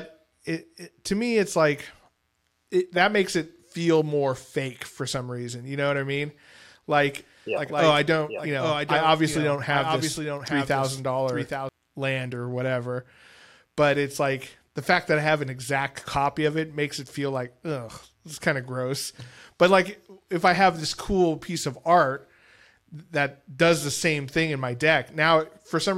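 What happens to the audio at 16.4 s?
At 16.4 s the speech carries on without interruption, with no audible fault at that point.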